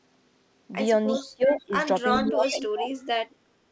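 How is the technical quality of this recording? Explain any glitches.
The recording has two recurring call-processing faults, heard against a band-limited call path with nothing above 8 kHz.

Echo leak at 1.15–1.21, 1.46–1.62, 2.09–2.24 and 2.43–2.65 s: a faint delayed copy of the speech arrives 367 ms late, about 15–20 dB down, likely from residual loudspeaker echo an echo canceller missed.

Speech suppressed in double talk at 1.23–1.74 s and 2.2–3.41 s: the talker dips by up to about 20 dB, then about 35 dB, likely because the canceller attenuated everything during overlap.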